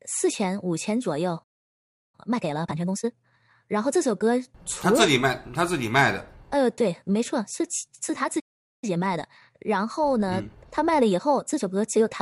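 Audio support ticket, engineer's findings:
Playback stall: speech cuts to silence mid-flow at 1.43–2.15 s (about 0.70 s) and 8.39–8.84 s (about 0.43 s). Likely buffer underrun or blocked player thread.

Time-compressed catch-up: speech hurried at normal pitch, 2.15–3.55 s at 1.5x and 8.84–11.70 s at 1.15x. Player cross-fading out small segments to drain backlog after each stall.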